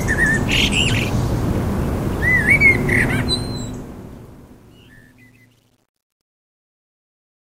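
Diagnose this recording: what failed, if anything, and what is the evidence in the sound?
Truncation distortion on the fade-out, 3.08 s to 7.45 s, points to an undithered gain or sample-format stage, consistent with about 10-bit resolution. From 4.12 s the tail turns gritty. The waveform shows square steps, and the spectrogram shows broadband hash.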